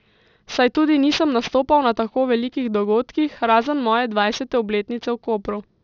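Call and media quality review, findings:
Aliasing throughout the speech. Sibilants gritty, metallic, energy packed up to 6 kHz. Downsample from 48 kHz to 12 kHz without anti-alias filtering; content above 6 kHz folds back, roughly 20 dB down.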